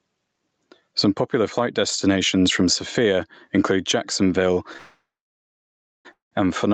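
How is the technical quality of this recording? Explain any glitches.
The recording has constant gain pumping and two call audio freezes near the end.

Gain pumping runs through the whole clip. The background swells in the pauses and ducks by around 20 dB under each loud sound. The likely cause is input gain set far too high, with a fast limiter clamping it down. On the waveform the peaks look flattened, and the noise floor rises between bursts.

The first call audio freeze runs from 4.77 to 6.07 s, and a second from 6.13 to 6.33 s. In each, the last sound carries on as a fading buzz or hiss and then drops to silence, about 0.99 s long in the first and 0.14 s in the second. The speech then resumes where it stopped, so the freezes insert gaps rather than losing anything. This is likely a jitter buffer running empty while packets were held up. On a spectrogram, smeared horizontal bands fade into blank gaps, and throughout the clip there is no energy above 8 kHz.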